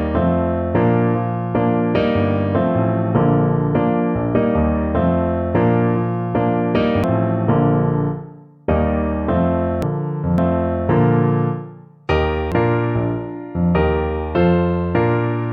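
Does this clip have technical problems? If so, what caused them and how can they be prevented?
Yes: compressed frames skipped at 7.04, 9.82, 10.38 and 12.52 s, jumping about half a second, then about 0.7 s, as whole frames vanish; waveforms show splices. Use error-checked, complete files.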